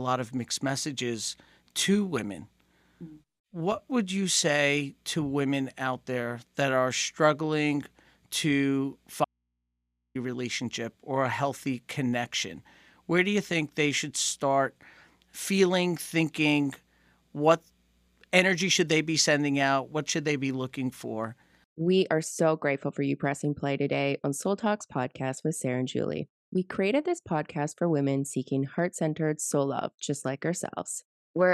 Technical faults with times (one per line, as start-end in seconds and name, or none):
9.25-10.15 audio dropout to a faint residue